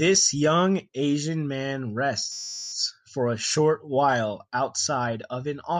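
A system hang loop runs from 2.32 to 2.73 s, just before "for a short while". The machine or its audio driver stalled while the sound hardware kept replaying the same 10 ms ring buffer, so that one sliver of speech repeats some forty times. At 100 repeats per second the loop fuses into a steady, flat 100 Hz buzz in place of the voice. When the system recovers, speech picks up with essentially nothing lost.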